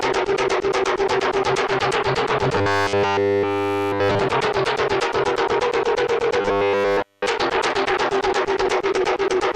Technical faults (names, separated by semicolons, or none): robotic sound from repeated short buffers